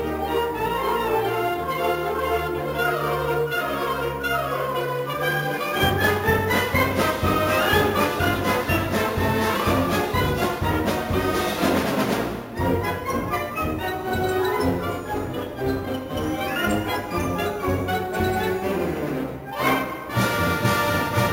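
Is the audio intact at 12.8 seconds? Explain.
No. At 12.8 seconds, as throughout the clip, the audio carries imaging from sample-and-hold upsampling. It was raised from 16 kHz to 44.1 kHz by repeating each sample without a smoothing filter, so a mirrored copy of the spectrum sits between 8 and 16 kHz at about 19 dB below the signal, heard as a bright metallic fizz. Unlike steady hiss, it rises and falls with the sound, and unlike aliasing it mirrors the band directly above 8 kHz.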